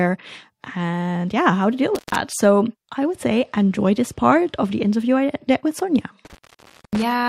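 A loose cable or plug briefly breaks the signal path, an intermittent contact, so the speech drops out with crackle at each edge and faint hiss underneath: after "yeah how to deal", 1.95 to 2.16 s (open 133 ms, before "so i would say"), and after "i did with sonia", 6.25 to 7.03 s (open 584 ms).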